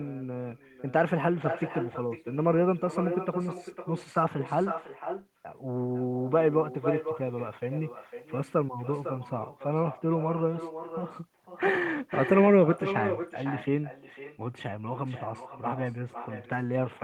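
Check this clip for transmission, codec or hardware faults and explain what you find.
One fault runs through the whole speech clip: echo with no canceller. The far end's loudspeaker feeds the microphone and nothing subtracts it, so each phrase returns about half a second later, roughly 8 dB quieter, as a thinner trailing copy.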